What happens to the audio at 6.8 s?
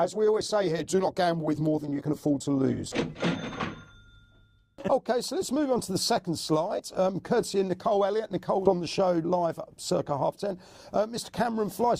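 At 6.8 s, compressed frames are skipped. Whole blocks of encoded audio never reach the output, either because they are missing from the stream or because the decoder rejected them as damaged, so playback jumps forward. The jump is around 40 ms, which fits two dropped 20 ms frames. In a lossy codec adjacent frames overlap, so the seam would be a brief smeared blip; lossless frames would join with a hard click. On a spectrogram, the content shifts abruptly at that instant with a short vertical smudge. In the waveform, the envelope lurches, and the surrounding cycles don't line up.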